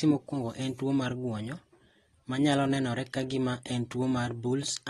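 From start to finish, the speech carries plainly audible codec damage, most likely from AAC compression. Nothing sounds above 12.4 kHz, so the top is cut away and the sound turns dull. The damage fits AAC-LC at a low bitrate, around 32 kbps. At that rate the encoder has too few bits for the spectrum. It drops fine detail the hearing model judges masked. Sibilants and held sounds take on a smeared, warbling, fizzy texture.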